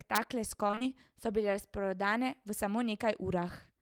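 From 0.67 to 0.91 s the speech turns choppy and robotic, a case of repeated packet loss. Several short holes, the longest about 20 ms, are patched by stretching the preceding sound, so nearly half the span is repeated material. A spectrogram shows smeared, duplicated harmonic slices and abrupt column breaks.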